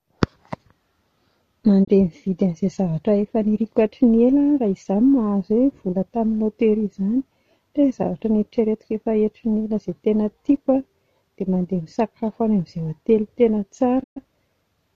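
Digital broadcast dropouts occur at 1.83 to 1.89 s and again at 14.02 to 14.18 s. Each time the receiver stopped getting valid frames and muted, so the speech fades out over about 20 ms, falls silent, and resumes mid-stream. The first hole is brief, around 24 ms of lost audio, which fits a single bad frame. The second is longer, about 120 ms, consistent with a run of roughly five frames, and whatever was transmitted during each gap never arrives.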